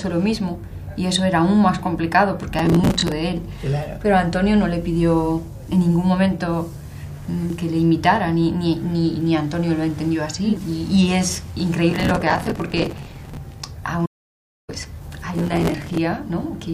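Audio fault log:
2.59–3.12 s, 11.91–13.37 s, 15.38–15.98 s: processor overload crackle. Each burst is a gritty, tearing crackle riding on the sound, lasting about 0.5 s, 1.5 s and 0.6 s. The processor repeatedly missed its deadlines for short buffers, on the order of 5 ms, from a few dozen up to around a hundred in a row. Each miss replayed a fragment of stale audio with hard edges, and the rapid chain of those splices produces the crackle, which stops once the load eases.
7.50 s, 10.57 s: damaged data in a compressed stream. Each is a brief chirp or blip, a single momentary event rather than a sustained texture. Corrupted bytes in the compressed data made the decoder misread the frames at that point and lose sync. It then skipped forward to the next valid frame header, so the output carries a short burst of garbage.
14.06–14.69 s: audio dropout to silence. The sound cuts off abruptly and returns after about 0.62 s. 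The gap is silent with no room tone, meaning the recorder kept writing silence while no input reached it. This most likely comes from the input being lost briefly, such as a device disconnect, a failed link or a stray mute. Whatever occurred during that span is missing entirely.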